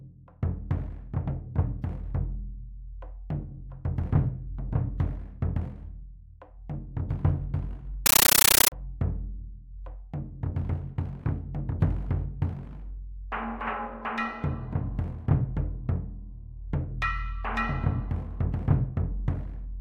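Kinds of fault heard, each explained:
Compressed stream played as audio: from 8.06 to 8.72 s the sound gives way to chattering static, because an encoded Dolby Digital stream was passed on as if it were ordinary samples. Each data frame plays as a noise burst of about 13.3 ms followed by a silent gap, repeating 31.25 times a second, which fits a 640 kbps AC-3 stream. That steady burst-and-gap rhythm sets it apart from random digital noise or clipping.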